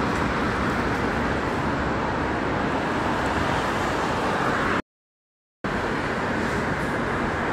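At 4.80 s the sound cuts off abruptly mid-flow. What follows is an audio dropout to silence lasting about 0.84 s, until 5.64 s. The gap is dead silence, with no room tone or hiss underneath. The sound then resumes just as suddenly. The input was likely lost for that moment, through a disconnect or a stray mute, while the recorder kept writing silence. Whatever happened during the gap is gone.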